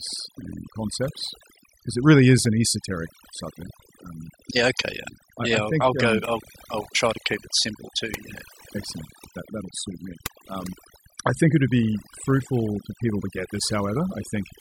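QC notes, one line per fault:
Throughout, overdone noise removal: reduced background with twinkling specks, as aggressive noise reduction muted bands near its noise estimate, taking quiet speech detail too.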